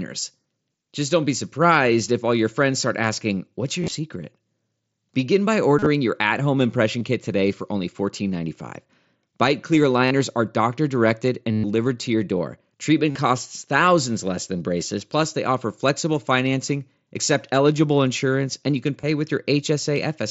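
Concealed Bluetooth headset packet loss occurs at 3.82–3.95, 5.79–5.86, 6.99–7.01, 10.06–10.11, 11.52–11.64 (between "are doctor directed" and "to your door"), 13.11–13.15 (just before "costs thousands less than") and 19.01–19.03 s (after "insurance and you can"). Lost headset packets were patched by repeating recent waveform, which produces brief buzzy held tones at full level. On a spectrogram these show as flat, evenly spaced harmonic bands. The waveform shows repeating periodic cycles, followed by a slight warble as the real speech returns through the wideband mSBC link.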